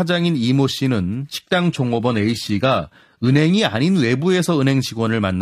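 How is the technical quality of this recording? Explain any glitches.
The recording has one audible glitch: a two-second stretch where the sound quality suddenly drops, then recovers.

From 1.38 to 3.38 s the speech comes from an adaptive stream at a lower bitrate. When the connection slowed, the player switched to a much leaner encoding, which fits a move from ordinary AAC at around 96 kbit/s to a low-rate HE-AAC around 20 kbit/s. That encoder cuts the bits spent on high frequencies and rebuilds the treble synthetically, so in this stretch the top sounds thin, metallic and swishy. On a spectrogram there is a sharp vertical boundary at each end, with nothing above 14.9 kHz and a smeared, patchy upper band in between. The waveform shows no gap or dropout, only the abrupt change in texture.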